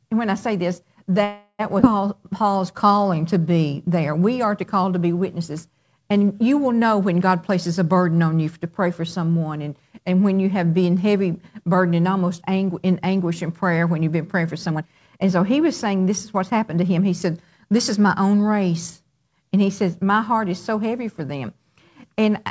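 From 1.24 to 1.61 s a call audio freeze stretches the last sound into a fading buzz, with about 40 ms of silence. Packets were likely held up, emptying the jitter buffer. Nothing is lost, which separates it from a dropout.

At 1.81 to 1.84 s a skip ahead jumps forward almost seamlessly. About 150 ms of audio is discarded, a jump rather than an inserted pause.

From 2.18 to 3.59 s a jitter buffer slow-down repeats pitch periods to add 150 ms. The audio plays at 90% speed with unchanged pitch, unlike tape-style slowing.

From 14.66 to 17.05 s a jitter buffer speed-up trims short pitch periods, removing about 300 ms. The audio runs at 114% speed and sounds hurried, while the pitch holds steady.

Throughout, the call codec passes nothing above 8 kHz, which fits G.722 at 64 kbps.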